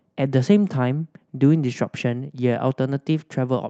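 No technical faults are audible in this speech, which carries the normal marks of a call path: content stops at about 8 kHz, and the usual coding texture fits an Opus codec at around 48 kbps.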